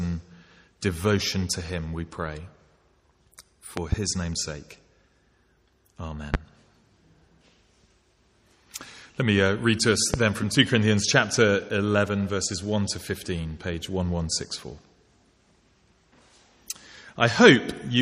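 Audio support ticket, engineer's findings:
Loud pop, three events. Double pop at 3.77–3.95 s, about 15 dB above the programme. Single pops at 6.34–6.37 s (about 20 dB above) and 10.14–10.17 s (about 15 dB above). Sound continues underneath each. Likely cause: a voltage step or pulse from a switch, connector, static discharge or driver glitch, shaped by the downstream stages. Waveform shows tall isolated spikes. Spectrogram shows thin full-band vertical lines.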